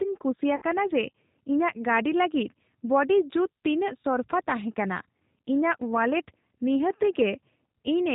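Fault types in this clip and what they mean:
G.729 codec: The whole clip runs through an 8 kbit/s speech codec that rebuilds the voice from a filter, a pitch predictor and a few pulses per frame. Nothing above 4 kHz gets through, and the speech sounds plainly rough and somewhat synthetic.
VoIP packet loss concealed by the speech codec: Around 0.56 to 0.65 s, roughly 60 ms of audio goes missing, which fits three 20 ms packets. The decoder stretches its last pitch and filter into a fading buzzy tone or coloured noise. A shorter 20 ms gap near 4.03 s does the same briefly.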